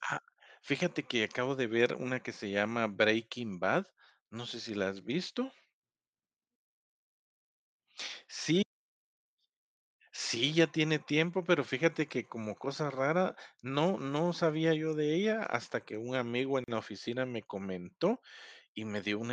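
A gap at a join of encoded pieces opens at 16.64 s, a silence of about 39 ms in the speech. Separately encoded sections were joined untrimmed, so encoder start delay and end padding remain, cutting the sound abruptly, with smeared edges, before it resumes where it stopped.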